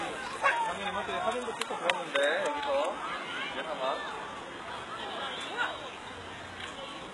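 From start to finish, the audio carries heavy codec damage. The treble sounds bright but synthetic, with a gritty, metallic sheen that does not match the body of the sound below it. Nothing reaches above about 11.5 kHz. This points to HE-AAC compression at a very low bitrate, likely around 12 kbps. The codec keeps only the lower spectrum, then fakes the top by copying lower bands upward. The copied harmonics never line up with the real ones.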